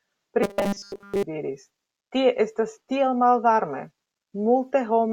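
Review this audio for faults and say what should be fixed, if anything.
From 0.43 to 1.23 s, before "diris tie estas tiel", speech becomes a rigid 200 Hz robotic buzz, likely from repeated short buffers of about 5 ms. A larger jitter buffer on the receiving end would help audio arrive in time, so nothing gets looped.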